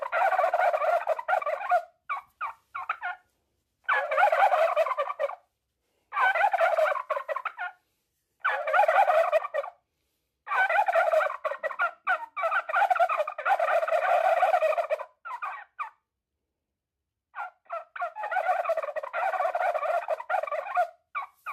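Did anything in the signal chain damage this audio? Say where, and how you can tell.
Yes, damaged data in the compressed stream at the codec stage: corrupt frames knock the decoder out of sync, causing short blips at 1.39 s and 9.36–9.38 s.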